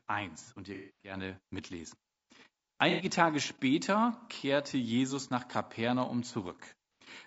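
Throughout, the speech sounds rough and grainy, with noise filling the gaps between harmonics and a thin, synthetic-sounding top band. This is likely low-delay AAC compression (AAC-ELD), whose short frames resolve pitch poorly; the damage fits a bitrate around 32 kbps.

Right after "und ihr", from 0.74 to 1.16 s, the sound turns smeared and noisy. Shorter phasey patches follow at 2.90 to 3.04 s and at 7.02 s. This is AAC frame loss with concealment: the decoder fills missing stretches from the last good spectrum. In the first gap, about 270 ms is lost over 300 ms, and the longest run is roughly 200 ms.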